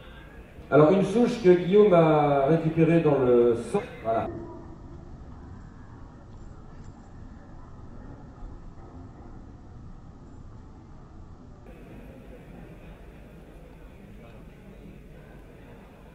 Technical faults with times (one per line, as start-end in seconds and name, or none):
4.26-11.66 section at the wrong speed